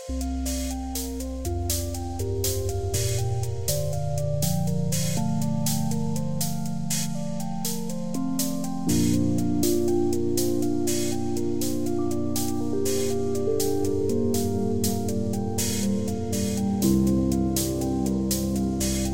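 No technical faults detected anywhere in the clip.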